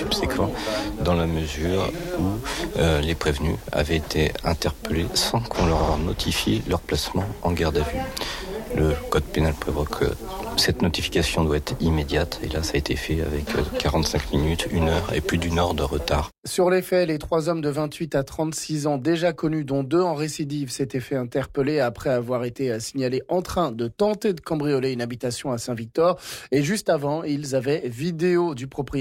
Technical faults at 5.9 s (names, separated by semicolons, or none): repeated frames